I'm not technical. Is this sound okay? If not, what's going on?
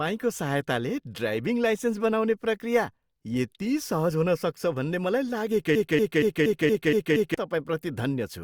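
No. From about 5.75 to 7.34 seconds, the speech gets stuck: a tiny slice of sound, roughly a quarter of a second long, plays over and over, seven times in a row, like a scratched record. This is a broken-record loop. The likely cause is that the player or stream briefly stalled and kept replaying the last scrap of audio it had. Whatever should have been heard during those seconds is missing.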